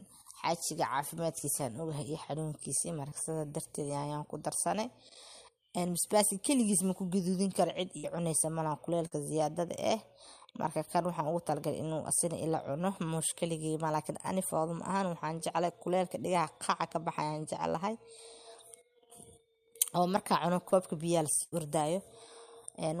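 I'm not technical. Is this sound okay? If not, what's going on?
No. There are four brief dropouts where bits of the audio never arrived. In a burst of packet loss, at 7.98 to 8.05 s and 21.43 to 21.54 s, the sound stretches into a held buzz or fading hiss, then jumps ahead with a chunk missing. Short concealed packet loss, at 9.07 to 9.13 s and 20.69 to 20.73 s, is quicker and gets patched over, so you hear only a tiny smear or wobble.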